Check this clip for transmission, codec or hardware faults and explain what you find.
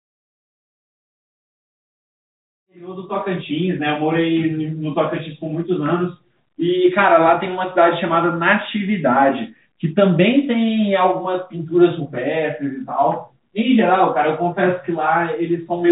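The signal is in good technical order, carried over a 64 kbps G.711 A-law call path that leaves nothing above 4 kHz, with the level rising gradually from around 2.5 s to full strength by 3.56 s.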